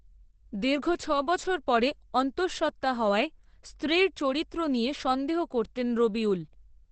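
Throughout, the speech is heavily muffled and hoarse, with nothing above 8.5 kHz. Likely cause: Opus compression in speech mode, fitting roughly 12 kbps.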